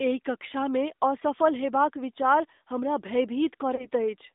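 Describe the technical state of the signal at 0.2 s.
At 0.2 s the speech carries the AMR narrowband mobile codec, throughout the clip. Its pulse-driven vocal-tract model sounds plainly buzzy and synthetic, which fits a 10.2 kbps mode. The band spans only 250 Hz to 3.7 kHz.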